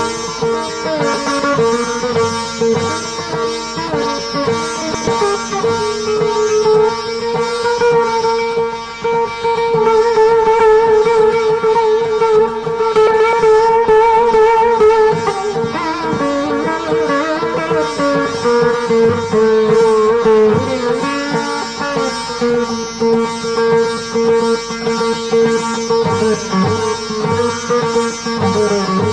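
At 1.14 to 1.40 s, 4.82 to 5.08 s and 13.07 to 13.33 s, frames out of order swap two adjacent 128 ms blocks, which fits four-frame runs. Each stretch becomes a garbled flutter, visible as vertical discontinuities in the spectrogram and waveform.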